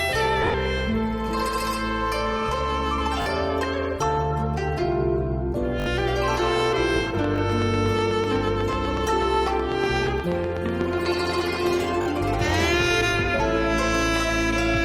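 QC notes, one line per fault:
0.42–0.54 s, lost LE Audio frames: about 90 ms goes missing in a 120 ms stretch, with gaps up to roughly 40 ms. The decoder refills them with noisy, fading copies of the last spectrum, so the sound smears.
3.22–3.26, 5.80–5.86, 7.36–7.38 and 12.02–12.06 s, repeated buffer: the same 20 ms snippet replays one to three extra times with hard joins. This is a quick stutter, and the length fits a 20 ms buffer.
7.24–11.81 s, train of clicks: about 40 evenly spaced ticks at roughly 8 per second, peaking about 10 dB above the audio. The likely cause is interference from nearby equipment.
10.06 s, lost LE Audio frames: a single 10 ms dropout is concealed with a brief noisy patch that sounds like a tiny blur.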